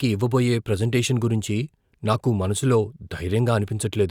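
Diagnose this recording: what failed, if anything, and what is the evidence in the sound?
No stage of the chain shows any failure, and the speech signal stays continuous and stable throughout the recording.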